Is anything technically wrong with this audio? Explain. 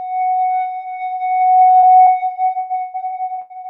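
Yes. Short concealed packet loss occurs at 1.79–1.85 s and 2.02–2.10 s, each hiding about 40 ms of missing audio. The decoder extends the preceding sound, heard as a brief smear.

Repeated packet loss (robotic sound) runs from 2.59 to 3.53 s. Five gaps, the longest 120 ms, are patched in turn, and about 41% of the span is concealed. The result sounds choppy, with a waveform of looped, flattened segments.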